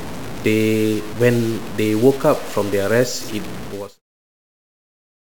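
From start to end, the speech carries a grainy, gritty distortion that moves with the voice. This is low bit depth without dither. The likely cause is samples truncated to very few bits, around 5, with no dither to break up the error. The error tracks the signal, sitting only about 15 dB below it. Quiet syllables turn rough and sputtery. The grit persists into the smooth fade-out that ends near 4.02 s.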